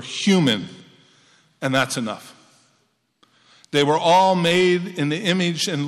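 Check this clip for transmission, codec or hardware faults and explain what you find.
Hard clipping occurs three times: 0.28 to 0.53 s (about 6 dB over), 1.74 to 1.83 s (about 8 dB over) and 3.76 to 4.73 s (about 7 dB over). The level exceeded what a stage could pass, so its peaks were sliced flat. The resulting high harmonics give the speech a harsh, crackling fuzz.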